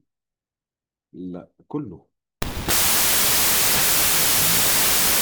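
At 2.42 s, a wrong sample width fault begins, fitting 32-bit data read as 16-bit. Dense loud noise floods the spectrogram, hiding half-speed, octave-low speech.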